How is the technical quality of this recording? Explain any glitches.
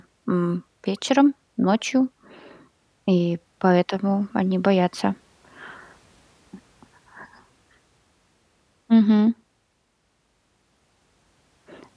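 Nothing wrong can be heard anywhere in this recording.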